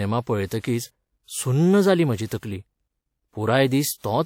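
Speech with pre-echo, twice, just after "जाली म्हाजी". A short hiss precedes two attacks, at 2.26 to 2.31 s and 2.38 to 2.43 s. Each smear spans about 50 ms. The codec spread quantisation noise across its block, filling the quiet before each onset.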